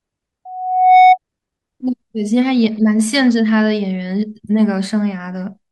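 At 0.45 s a loudspeaker feedback squeal starts. A single tone near 741 Hz swells over about half a second until it sits well above the speech. The microphone is hearing its own loudspeaker, and the loop runs away at that frequency. It stops at 1.18 s.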